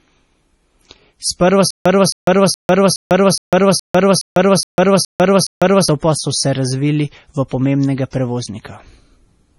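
Low-bitrate audio saved at a high bitrate runs through the whole speech clip. Nothing is present above about 11.4 kHz, and the dull, smeared MP3 artefacts point to a likely 32 kbit/s encoding later re-saved at 256 kbit/s, which could not restore the missing detail.

Stutter with silent gaps, from 1.71 s to 5.88 s: a 268 ms burst repeats ten times, each followed by 150 ms of digital silence, every 418 ms. The player or stream likely stalled, replaying its last fragment at each retry, and the audio meant for that stretch is lost.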